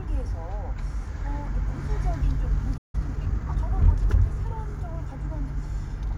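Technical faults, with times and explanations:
2.77–2.95 s, playback stall: the audio just drops out for about 160 ms, a clean hole in the middle of the everyday sounds rather than a fade or a click-and-recover. That abrupt gap is the classic sign of the player going hungry, most likely an empty buffer or a blocked audio thread holding up output until data arrived again.
2.95–3.57 s, time-compressed catch-up: right after the gap, the next stretch runs hurried, at about 1.25 times normal speed, yet the pitch stays put. It sounds rushed because the player is trimming out tiny slices and cross-fading the joins to burn off the backlog the stall built up. By 3.57 s it has caught up and the pace settles back to normal.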